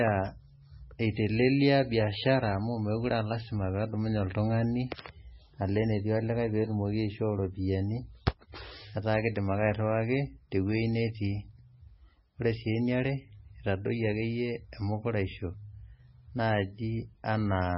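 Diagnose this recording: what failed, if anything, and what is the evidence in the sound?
The codec stage is where this went wrong: it's heavy MP3 compression, likely at a very low bitrate, somewhere around 17 kbps. The speech has nothing above 5.6 kHz for the whole clip, and the s sounds go swirly and metallic because the encoder keeps dropping weak frequency lines frame to frame.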